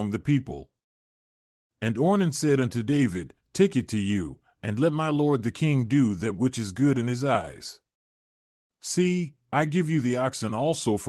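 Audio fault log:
No faults heard in this speech.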